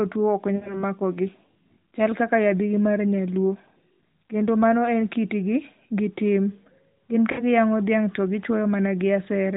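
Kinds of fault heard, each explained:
Lost AMR speech frames: the speech briefly smears and fades after "tuo ok" at about 0.56 to 0.83 s, and again at 7.32 to 7.43 s just before "giyang'o dhiang' to". Corrupted frames were discarded and the decoder extended the previous sound at falling gain, a gap of about 60 ms each time.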